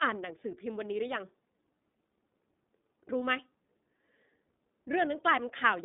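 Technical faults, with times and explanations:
Throughout, iLBC codec: the speech is confined to a telephone band of roughly 200 Hz to 3.7 kHz, with nothing above 3.8 kHz, and the coding damage is plainly audible as a rough, slightly synthetic edge. The 30 ms frames are each coded without relying on the previous one, and a rate that fits 13.33 kbps leaves grainy texture rather than the smeared warble of a low-bitrate wideband codec, which would keep more top end.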